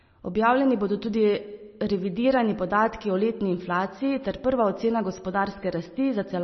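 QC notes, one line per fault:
Throughout: MP3 compression, heavy. Nothing is present above about 5.9 kHz, so the speech sounds dull with the top octave missing. Weak frequency lines switch on and off between frames, which gives a watery, swirly texture and metallic chirps on s sounds. This most likely comes from a low bitrate of roughly 26 kbps.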